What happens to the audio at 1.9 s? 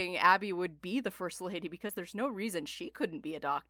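At 1.87 s the speech hits a short concealed packet loss, lasting to about 1.91 s. About 20 ms of audio failed to arrive in time for decoding. The receiver patched roughly 14 ms of that gap by extending the preceding sound, then crossfaded back into the real signal. The result is a brief smear or wobble rather than a clean dropout. A quick consonant at that point could be blurred or lost.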